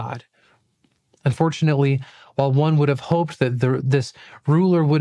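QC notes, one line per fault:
No fault to note.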